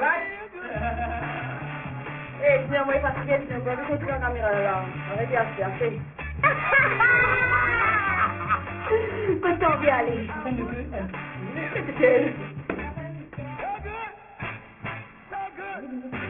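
Aliasing runs through the whole clip. The audio has been reduced to a much lower sample rate, consistent with about 6 kHz, without an adequate anti-aliasing filter. Content that was above the new 3 kHz limit has folded back down below it and now sits at unrelated frequencies, fairly strong at around 10 dB under the wanted signal. The result is a gritty, metallic edge on the upper range, with the spectrum packed hard up against 3 kHz.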